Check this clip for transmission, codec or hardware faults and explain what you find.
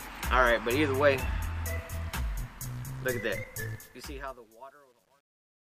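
There is one fault: truncation distortion on the fade-out that begins around 3.7 s. From 3.73 s to the end at 5.76 s, the fade stage discards low-order bits without dither, which fits a 10-bit word length. The shrinking waveform breaks into coarse square steps. From 4.13 s onward the tail turns gritty instead of thinning away.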